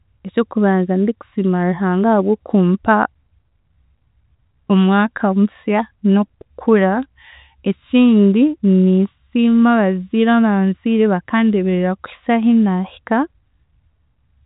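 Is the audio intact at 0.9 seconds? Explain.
Yes, the speech at 0.9 seconds is intact, carried through the telephone-band G.711 coding with nothing above 4 kHz, and there is no fault at that moment.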